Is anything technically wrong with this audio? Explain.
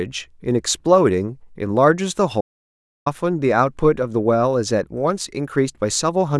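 Yes. From 2.41 to 3.06 s the speech cuts out to dead silence, no room tone at all, for about 650 ms. It's an audio dropout to silence, likely an input lost while zeros were still written.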